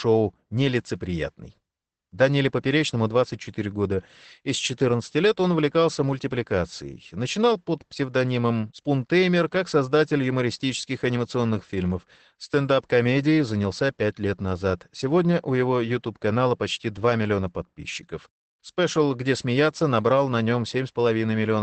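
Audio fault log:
throughout Opus voice compression: speech sounds muffled, hoarse and slightly robotic, with nothing above 8.5 kHz; coarse wideband SILK coding, which fits a low 12 kbps bitrate.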